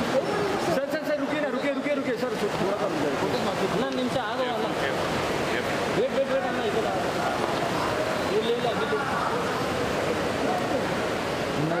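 No technical faults can be heard in the audio.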